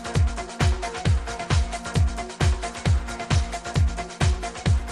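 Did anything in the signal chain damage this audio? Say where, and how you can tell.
No, nothing I can hear in this audio points to damage at any stage of the signal chain.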